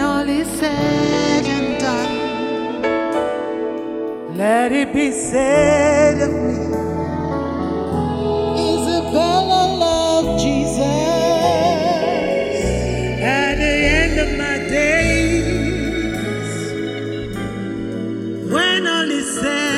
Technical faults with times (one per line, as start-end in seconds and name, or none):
0.00-19.78 channels drifting apart